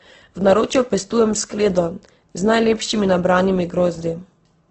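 Throughout, the speech is dull, with nothing above 8.2 kHz, and a smeared, warbly texture mixes with the artefacts of a second codec. That's likely transcoding between lossy codecs: a very low-rate Opus encode, then a WMA pass that re-encodes those artefacts and keeps the cut-off.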